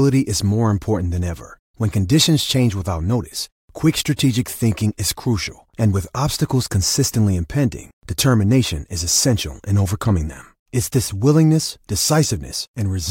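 A speech recording, with nothing technically wrong with it.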